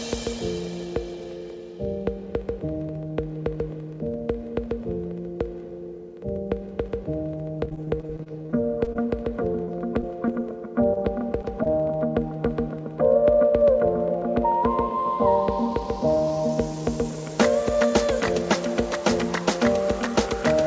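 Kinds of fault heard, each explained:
Repeated packet loss (robotic sound), 7.6 to 11.7 s: about twenty brief dropouts, none longer than about 27 ms, arrive in quick succession. Each is patched by stretching the preceding sound, so the passage turns choppy with pieces missing, heard within a band that stops at 8 kHz.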